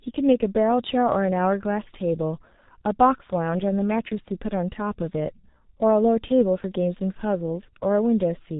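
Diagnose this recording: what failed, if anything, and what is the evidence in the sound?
Muffled, hoarse speech with smeared consonants and nothing above 4 kHz throughout: heavy G.723.1 codec damage, its coarse 30 ms frames fitting a bitrate around 6.3 kbit/s.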